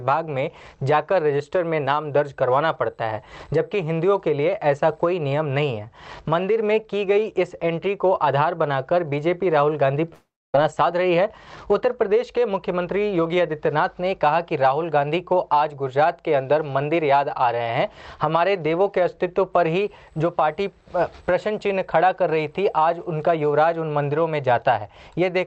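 At 10.13 s the sound breaks up in a way that's most likely a long network dropout. The receiver fills about 415 ms by stretching out the last bit it had, so you hear a buzzy, hissy tail that fades away. Around 280 ms of that ends up as plain silence, and when the audio returns at 10.56 s, roughly 300 ms of material is simply gone.

Right after, from 10.63 s to 11.83 s, there's a jitter buffer speed-up. The stall left the buffer holding more than it wants, and when the backlog arrived it trimmed tiny pitch-period slices again and again, around a tenth of a second in total. The pitch stays the same but playback runs at about 108%, so that stretch sounds a little rushed. All of this sits on a call path whose top end stops at 8 kHz, which fits Opus at around 32 kbps.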